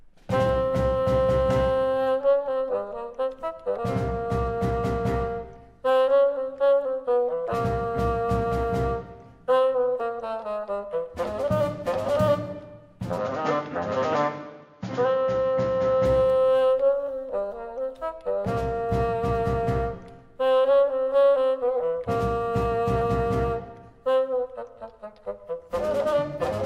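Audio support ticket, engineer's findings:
Band narrows 13.18–16.05 s, nothing above 7 kHz, duller tone, no gap at switch, no real level jump. Likely input switched to a poorer device. Distinguished from codec band-limiting by its own new background noise, about 45 dB down.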